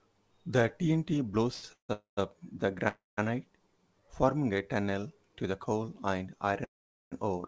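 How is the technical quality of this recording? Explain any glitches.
The recording has a cluster of delivery glitches typical of a call, all heard over a band that stops at 8 kHz, which fits a wideband call codec like G.722.

Short stall from a late packet, 1.54 to 1.64 s: a packet arrived late and the jitter buffer ran dry, so the receiver held the last sound for about 85 ms before carrying on from the same spot. You hear one sound hang a bit too long, with a slight buzz or dip, and nothing is skipped.

Call audio freeze, four times: 1.72 to 1.91 s, 1.93 to 2.19 s, 2.88 to 3.19 s, and 6.64 to 7.14 s. Each is likely packets held up in transit, draining the buffer. The receiver stretches the last sound into a fading buzz or hiss, then goes quiet, for about 110, 140, 190 and 440 ms of silence within gaps of 163, 242, 292 and 472 ms. The audio then resumes where it stopped, so pauses are inserted rather than anything lost.

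Jitter buffer slow-down, 4.81 to 5.01 s: the buffer rebuilt its reserve by repeating single pitch periods or bits of pauses, adding 40 ms. That stretch plays at about 84% speed with the pitch unchanged, so the sound drags a little.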